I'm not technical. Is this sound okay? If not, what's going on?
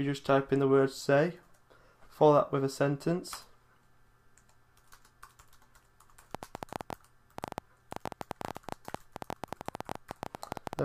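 No. From 6.35 to 10.8 s there's a train of clicks, about 11.5 uneven pops per second. Likely cause: nearby electrical interference or a faulty connection or power supply.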